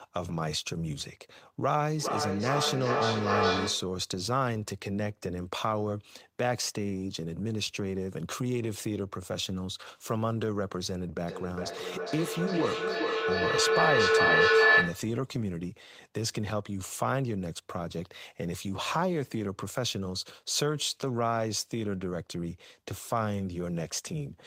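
From 1.97 to 4.03 s and again from 11.28 to 15.19 s, feedback echo between two devices sends the speech around a second device's loudspeaker and microphone, returning about every 0.4 s. The thin, ringing copies rise to about 2 dB, then about 8 dB, above the speech, showing as evenly spaced stacked bands on a spectrogram and a waveform that builds instead of decaying.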